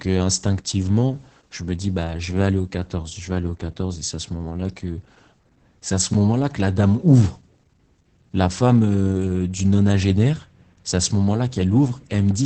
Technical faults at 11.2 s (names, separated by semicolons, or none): Opus voice compression